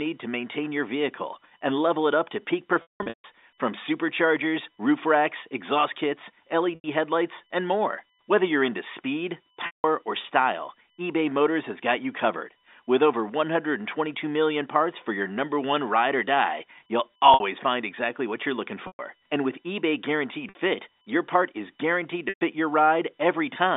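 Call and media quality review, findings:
USB whine, throughout: steady fixed-pitch whine at 1 kHz, loudest at its 3 kHz harmonic, sitting around 45 dB under the speech. Probable component is the USB audio device's power or ground. The bus pulls current in 1 ms frames, and that ripple leaks into the analogue side as a 1 kHz tone plus multiples. Worth checking the cable, the hub or a ground loop. It sits inside the telephone band, which is doing its job.

Packet loss with pitch repetition, seven drops, all concealed by repeating the last pitch period:
2.82–3.24 s, a scattered burst of about 360 ms lost across 420 ms, longest gap 180 ms, which fits roughly 30 ms packets. Held buzz fading toward silence.
6.75–6.84 s, about 90 ms, brief buzzy hold.
9.66–9.84 s, between "you're into speed" and "or style", 180 ms, fades out, cross-fades back.
17.34–17.40 s, between "ride or die you'll" and "find exactly what you're", 60 ms.
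18.87–18.99 s, right after "exactly what you're looking", 120 ms.
20.49–20.55 s, 60 ms.
22.29–22.41 s, 120 ms.
Probable cause is network jitter or loss upstream, so check the jitter buffer and the link.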